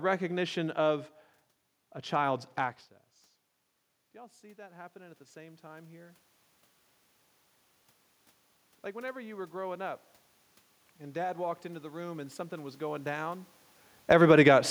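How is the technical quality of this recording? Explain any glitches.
The recording has audible level-control problems: the automatic gain control keeps pumping up and down, dragging the room noise with it.

Automatic gain rising happens three times: from 4.12 to 6.27 s, from 10.98 to 13.5 s, and from 14.36 to 14.66 s. In the first, the input drops by about 20 dB, and the AGC responds by slowly adding about 8 dB of gain. The second adds about 5 dB, and the last about 3 dB. Each time, the speech and the room noise swell up together. The rising background is the giveaway that a machine is turning the level up rather than the talker getting louder.

Automatic gain falling shows up from 13.97 to 14.36 s. The AGC decides the input is too loud, or its background too strong, and pulls about 6 dB out. You hear the sound sink, with the background dropping in step. It comes shortly after the talker shifts position around 13.5 s. 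Then it turns around and climbs again for that final short rise.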